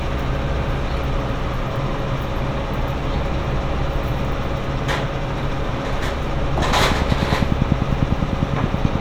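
From 6.62 to 8.96 s, a train of clicks ticks evenly, about ten per second and roughly twenty in all. They stand well above the sound, likely from electrical interference.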